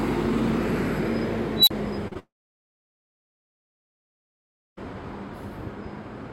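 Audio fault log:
1.56 to 1.71 s, unstable filter: a tone around 4 kHz swells for about 0.11 s into a harsh, clipped squeal, then the output cuts to silence for about 35 ms before the filter resets. A recursive stage with bad coefficients kept feeding its output back and amplifying it until the values overflowed. On a spectrogram this is a bright horizontal line near 4 kHz that thickens, followed by a blank gap. The waveform shows a rapidly widening envelope that flattens at its peak and then drops to silence.
2.08 to 2.13 s and 2.13 to 2.17 s, short concealed packet loss: two back-to-back gaps, of 40 ms and 20 ms, were patched with about 35 ms and 19 ms of continued sound. The decoder extended the last audio it had and then blended back into real data, so the passage sounds briefly smeared, with a wobble. On a spectrogram the detail blurs or repeats for a few hundredths of a second.
2.19 to 4.79 s, long network dropout: the audio is replaced for about 2.6 s. 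A short fading continuation of the last sound is followed by roughly 2.5 s of silence, and the sound then resumes further on with that stretch missing. This is likely a network outage during which the receiver briefly extrapolated and then gave up. On a spectrogram, energy decays into an empty band. The waveform goes flat until the sudden return.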